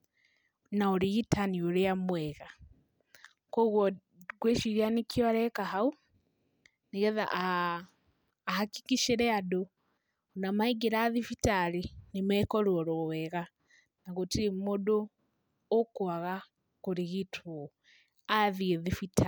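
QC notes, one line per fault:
No technical faults are audible anywhere in the clip. Nothing in the recording calls for a timestamped entry.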